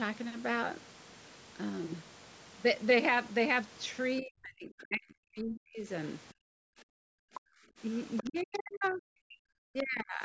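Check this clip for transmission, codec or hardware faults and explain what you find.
The clip shows echo-canceller trouble: the speech is suppressed during double talk, the background is gated, and the far-end voice leaks through.

Speech suppressed in double talk occurs from 4.21 to 5.88 s, 7.24 to 7.36 s, 8.22 to 9.16 s and 9.36 to 10.23 s. The talker's speech sinks by as much as roughly 40 dB. The likely cause is that both ends were talking at once and the canceller, unable to separate near speech from loudspeaker echo, attenuated everything. Because the dips cut into speech itself, this differs from the gating below, which only removes the room sound.

Background gated by the echo canceller appears from 6.33 to 6.96 s, with a drop of about 40 dB, and from 7.65 to 7.78 s, with a drop of about 22 dB. While the loudspeaker played, the canceller clamped the microphone, so the room tone falls away abruptly and then returns once it releases. 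Unlike double-talk suppression, nobody's speech is clipped here. Only the ambient floor vanishes, giving a brief dead-air pocket rather than a chopped-up sentence.

The other side's voice leaks through at 7.34 to 7.4 s and 8.17 to 8.44 s. A second voice slips in beneath the talker, well below the speech in the first instance and only modestly quieter in the second. This is likely residual loudspeaker echo that the canceller failed to subtract. What distinguishes it from suppression is that something is added rather than removed: an extra voice, not a gap. The call's microphone processing, which limits content to 8 kHz, is not a fault.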